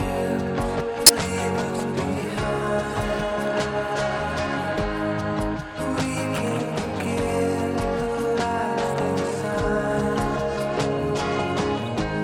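At 1.06 to 1.10 s a corrupt frame decoded gives a loud burst, a few damaged frames played with misread gains spraying energy across wrong frequencies. At 11.86 s a second, much quieter blip comes from a couple of corrupted frames.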